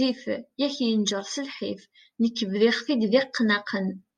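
No technical faults can be heard anywhere in the speech. Nothing in the recording calls for a timestamp or a closer look.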